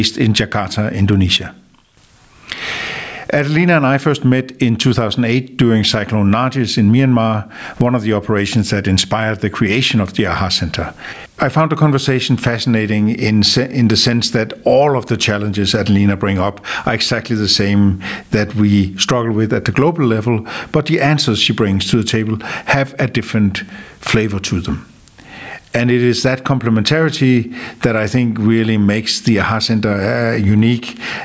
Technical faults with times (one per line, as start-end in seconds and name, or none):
0.00-31.24 gain pumping
1.37-1.97 sudden gain jump